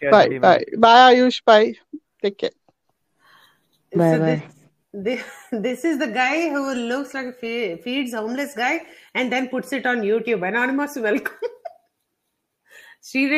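No technical faults can be heard anywhere in the clip. Nothing breaks, drops out or distorts along the way.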